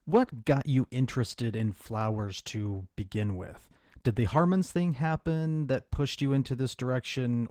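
Right from the start and through the whole clip, the speech has Opus voice compression at a bitrate that sounds like roughly 16 kbps. The lower band is coded coarsely by linear prediction, with a thin layer handling the top, so it comes out plainly muffled, hoarse and slightly robotic.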